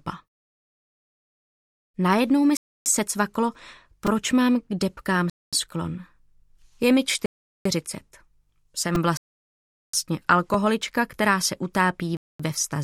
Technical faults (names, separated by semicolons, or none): Bluetooth stall; repeated buffer